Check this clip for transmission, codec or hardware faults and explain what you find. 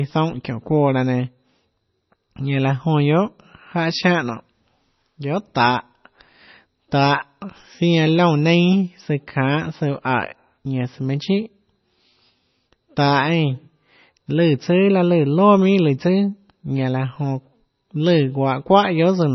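Throughout the recording, the speech sounds dull and watery, with nothing above about 5.9 kHz, so sibilants lose their crispness and turn into a swirling hiss. Quiet detail flickers in and out, giving a metallic, underwater shimmer, and consonant onsets sound smeared. This is likely heavy MP3 compression: starved of bits, the encoder cut the treble at a fixed point and dropped weaker frequency lines frame by frame. The damage fits a very low bitrate, around 24 kbps.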